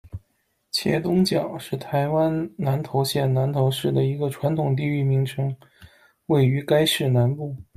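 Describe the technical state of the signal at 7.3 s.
At 7.3 s the speech signal is intact, with no audible fault at that point.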